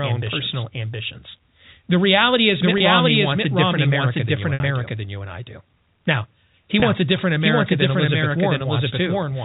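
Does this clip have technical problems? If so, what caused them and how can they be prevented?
Yes. The whole clip plays against a second, full-band copy of itself that trails by roughly 0.7 s at about the same loudness. This doubled audio track has no decay or room colour, so it sounds like a second playback of the same material rather than an echo. The likely cause is the same source being captured twice, once through a slower path, or an edit leaving two misaligned copies in the mix. To prevent it, route each source into the mix only once and mute any monitoring or loopback return before recording.

There is packet loss with pitch repetition at 2.78 to 2.80 s, at 4.54 to 4.60 s between "than you" and "I do", and at 6.80 to 6.82 s just before "a different". The receiver covers each gap by repeating the last pitch period. At 2.78 s and 6.80 s the 20 ms gaps come across as a brief held buzz. 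The 60 ms gap at 4.54 s is longer and fades before the speech cross-fades back in. The short gaps fit a single lost 20 ms packet, and the longer one fits about three. To prevent it, use a stable, uncongested network with an adequate jitter buffer, or add forward error correction.

The telephone band limit below 4 kHz is simply the G.711 link working as designed.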